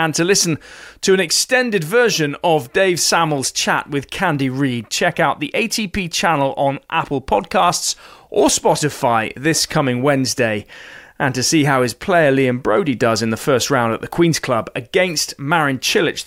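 No technical faults are audible anywhere in this speech recording.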